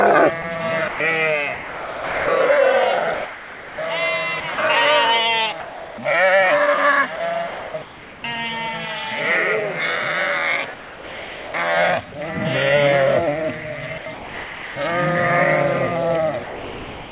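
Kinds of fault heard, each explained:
Sound chopped by the voice detector: The sound breaks up repeatedly within four stretches, 0.42–2.28 s, 3.14–4.58 s, 7.16–8.24 s and 13.98–14.76 s. Quieter parts are swapped for a smooth synthetic hiss, about 0.7 to 0.9 s in total per stretch, so the sound stutters. The likely cause is a sender-side voice detector toggling transmission on and off, with the receiver filling the gaps with comfort noise.
Sound dropped by the voice detector: The sound gives way entirely to steady comfort noise at 5.6–5.98 s, 10.74–11.54 s and 16.44 s to the end, before resuming in the first two cases. The missing portions are roughly 0.3 s, 0.65 s and 0.6 s long. This is likely the voice detector judging the quieter audio to be background and halting transmission until it triggered again. Nothing above 4 kHz is present, consistent with a G.711 A-law call codec.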